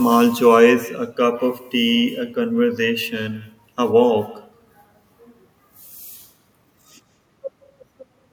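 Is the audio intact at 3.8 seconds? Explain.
No. At 3.8 s, as throughout, the speech carries an echo with no canceller: the far end's loudspeaker feeds its microphone and the talker returns, about 19 dB quieter, roughly 150 ms later. It is a distinct, thin repeat, not the smooth tail of room reverberation.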